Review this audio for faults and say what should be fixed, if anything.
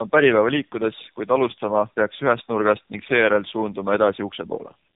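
Tandem speech coding runs through the whole clip: the signal was squeezed by a low-rate speech codec, decoded to plain G.711 mu-law at 64 kbit/s across an intermediate link, then coded again by AMR-NB at 7.95 kbit/s, so two speech coders worked in a row, the second one modelling the first one's artefacts. The result is speech that sounds rough, muffled and warbly, with nothing above 3.8 kHz. Carrying one codec end to end, or passing frames through untouched rather than decoding and re-encoding at each border, would prevent it.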